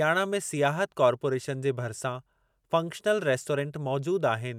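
No technical faults can be heard anywhere in this speech recording. There is nothing to place on a timeline.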